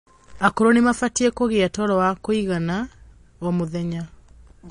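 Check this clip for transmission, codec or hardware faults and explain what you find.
One codec fault runs through the whole clip. The speech shows plainly audible damage, most likely from MP3 compression. Nothing is present above 10.6 kHz. That hard treble ceiling fits a low bitrate of around 40 kbps. Short of bits, the encoder drops weak frequency lines frame by frame. The result sounds watery and swirly, and s sounds chirp metallically.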